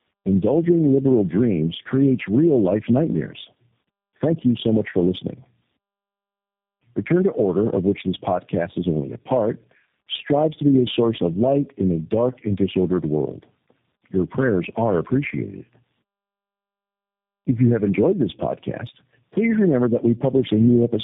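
Speech throughout carries tandem speech coding: band-limited to 3.7 kHz, rough, muffled and warbly, consistent with about four speech codecs in a row, likely including G.729A, each re-coding the previous coder's artefacts.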